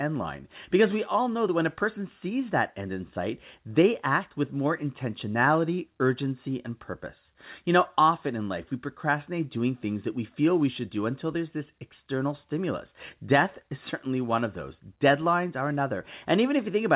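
Listening to this speech clip, which has come over a call path with nothing above 4 kHz, nothing stood out as a problem.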